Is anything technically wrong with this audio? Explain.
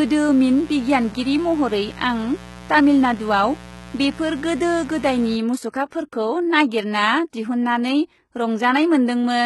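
Yes, three problems are audible.

Throughout the clip the speech has heavy codec damage: the treble stops dead at about 11.8 kHz, and the upper range sounds synthetic, with gritty or lisping s sounds. The likely cause is HE-AAC compression at a rate that fits roughly 16 kbps. HE-AAC codes only the lower spectrum and rebuilds the top by spectral band replication, copying lower bands upward under a coarse envelope. The rebuilt harmonics do not line up with the real ones.

From 0.00 to 5.36 s there is mains buzz at 60 Hz, roughly 20 dB below the speech. Something such as a dimmer, a rectifier or an unshielded lead lets sharp switching spikes into the signal twice per mains cycle, 120 times a second. Those spikes carry a long series of 60 Hz harmonics, so the interference is a steady, raspy buzz, not a clean low hum. It stops at 5.36 s.

There are two pre-echoes, from 5.70 to 5.74 s (32 ms) and from 7.31 to 7.33 s (23 ms). 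In each, a brief hiss runs ahead of a sharp attack, and the onset sounds softened and smeared. A transform codec spreads its quantisation noise across a whole block. When a loud attack falls late in the block, noise sized for that attack also fills the quiet stretch just before it.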